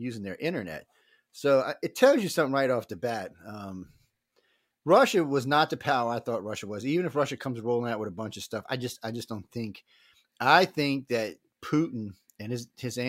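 No technical faults can be heard in this recording.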